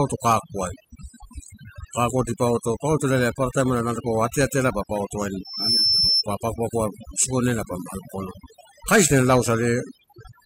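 Throughout the clip, overdone noise removal is at work: a noise reduction stage set far too aggressively pulls individual frequency bands down or out whenever they sit near its noise estimate. The background drops and breaks up into twinkling specks.

From 5.44 to 6.24 s, a loudspeaker feedback squeal appears when the microphone hears its own loudspeaker and the loop gain tops unity at 5.3 kHz. That tone swells over roughly a third of a second to sit around 5 dB above the speech, then stops just before "pa pagopago isikonela pa".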